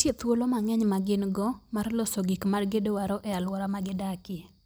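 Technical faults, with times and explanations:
No technical faults can be heard in this speech recording. There is nothing here to time or explain.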